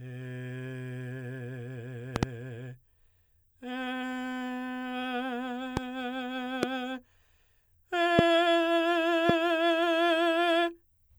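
Loud pops break into the music five times. A quick double pop spans 2.16 to 2.25 s, followed by single pops at 5.77 to 5.79 s, 6.63 to 6.65 s, 8.19 to 8.21 s and 9.29 to 9.32 s. Each is a sharp thump roughly 15 to 25 dB above the music, which carries on underneath, and is likely a voltage pulse from a switch, plug, static or driver glitch. A waveform shows tall narrow spikes; a spectrogram shows thin full-height vertical streaks.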